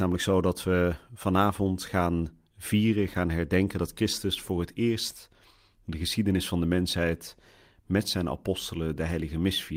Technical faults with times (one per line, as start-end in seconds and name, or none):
none